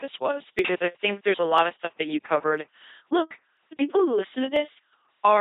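Speech pushed through an LPC-10 vocoder at 2.4 kbit/s, so the whole thing comes out as that heavy, buzzy robot voice: a short all-pole filter driven by either a pulse train or noise, with nothing above 3.8 kHz. On top of that there's audio missing between chunks, tiny skips of a few milliseconds at 0.59 s (just before "I think there's a"), 1.58 s (between "I think there's a" and "of stuff that you"), 2.58 s, 3.57 s and 4.56 s (right after "the people who"). The one-second spacing likely comes from 1 s processing blocks dropping a sliver at each handover.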